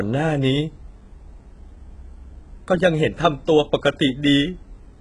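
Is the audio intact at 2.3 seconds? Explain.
No. HE-AAC compression, likely the cause, runs through the whole clip, including 2.3 s. The treble is rebuilt from copied lower bands rather than coded, so s sounds come out gritty and lispy, with nothing above 11 kHz. The heavy damage fits a bitrate near 12 kbps.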